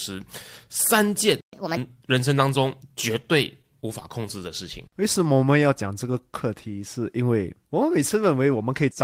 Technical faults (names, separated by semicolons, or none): playback stall; catch-up at higher speed; scattered short gaps; jitter buffer slow-down; jitter buffer speed-up